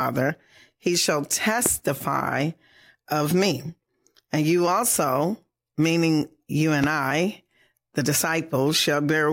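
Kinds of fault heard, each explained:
Loud pop: A single sharp pop lands on the speech twice, at 1.66–1.69 s and 6.84–6.86 s. Each peaks about 15 dB above the speech, which continues underneath. The likely cause is a sudden voltage pulse from static or a switch.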